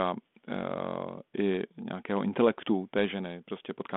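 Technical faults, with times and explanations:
0.52 to 0.60 s, bit errors on an ADPCM link: a short pop and rough burst with a brief level change. Flipped bits upset the decoder's step size and predictor, so the damage rings on for 80 ms. The error rate is very low.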